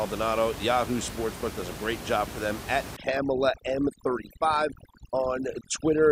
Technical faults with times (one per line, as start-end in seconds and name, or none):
2.96-6.12 overdone noise removal